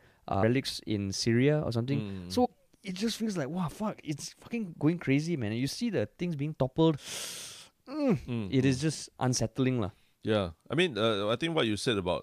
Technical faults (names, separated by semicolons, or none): damaged data in a compressed stream